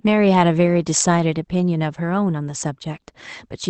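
Nothing in the speech counts as a fault; it has simply gone through an ordinary WebRTC call path, and the top end stopping at 8 kHz fits a normal Opus call running at around 24 kbps.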